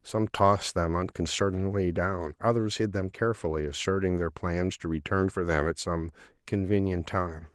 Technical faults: none

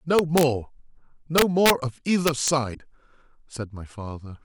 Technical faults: integer overflow; damaged data in a compressed stream

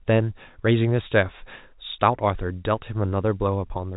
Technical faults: none

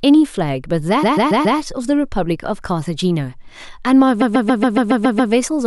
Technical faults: repeated frames

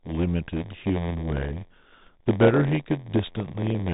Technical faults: block size mismatch (padded); Bluetooth CVSD headset codec

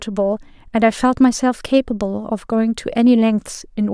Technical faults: none

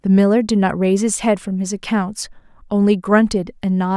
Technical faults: none

